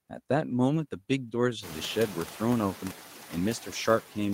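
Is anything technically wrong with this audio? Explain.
Yes. Noise suppressor artifacts run through the whole speech clip. The suppressor judges which frequency bands hold steady noise and lowers them frame by frame, here by about 6 dB. The room noise therefore dips between words and comes back underneath them. That room noise rises by about 19 dB at roughly 1.5 s and then sits about 17 dB below the speech.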